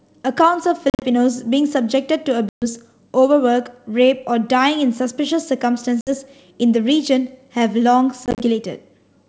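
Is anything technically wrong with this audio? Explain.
Yes. Hard-edged gaps at 0.90–1.04 s, 2.49–2.64 s, 6.01–6.11 s and 8.26–8.43 s, with slightly distorted speech as sound resumes, point to packet loss on an ADPCM call. Lost packets become silence, and the decoder's predictor and step size drift from the sender's before resettling. The first and last dropouts are broken into short scattered holes, while the middle two are single gaps.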